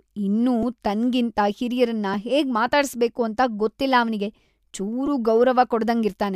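Repeated buffer at 0.63 s, just before "ತನ್ಗಿಂತ ಹಿರಿಯರನ್ನ", at 2.14 s, right after "ಇನ್ನೂ ತನ್ಗಿಂತ ಹಿರಿಯರನ್ನ", and at 5.07 s in this speech clip. A roughly 2.9 ms slice, which fits a 128-sample buffer, replays two, one and four extra times when fresh audio arrives late. This produces brief clicks and buzzes with almost nothing lost.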